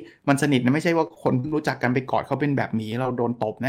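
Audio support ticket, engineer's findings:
1.07 to 1.54 s: choppy, robotic stretch. Repeated packet loss, four gaps up to 42 ms, about a quarter of that span patched by the jitter buffer's concealment.

2.92 s: small jump in the sound, around 10 ms of audio gone. Sounds like a dropped buffer, likely a capture overrun where the app read too late.

3.03 to 3.06 s: brief smear. Short concealed packet loss, 20 ms missing, bridged by the decoder extending the previous sound before blending back.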